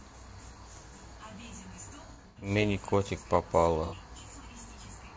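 Throughout, the speech sounds rough and grainy, likely from low-delay AAC compression (AAC-ELD) at a rate around 32 kbps; spectrograms show noise filling between blurred harmonics and a thin top band. From 2.06 to 2.50 s, AAC frame loss with concealment patches about 240 ms of dropouts scattered over 360 ms, the longest run about a tenth of a second, with smeared, noisy, phasey stretches showing as flattened spectral blocks. A shorter 60 ms loss at 3.86 to 3.95 s leaves a brief smeared patch.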